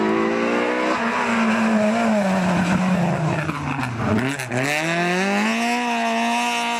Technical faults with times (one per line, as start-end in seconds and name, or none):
none